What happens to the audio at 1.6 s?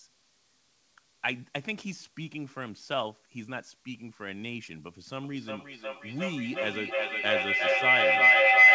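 Nothing goes wrong at 1.6 s: the speech carries straight through that moment with no dropout, glitch or distortion, only the steady band limit of the G.722 call path, with nothing above 8 kHz.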